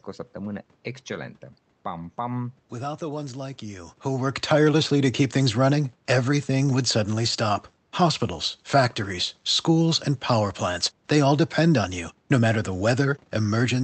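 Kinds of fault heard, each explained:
No faults are heard anywhere in this speech recording.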